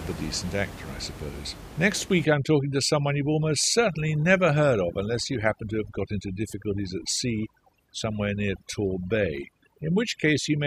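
Overdone noise removal affects this speech recording from 2.25 s to the end at 10.67 s. An over-aggressive noise reducer cuts frequency bands near its noise estimate, so room noise about 15 dB below the speech becomes twinkling near-silence, and quiet vocal detail vanishes.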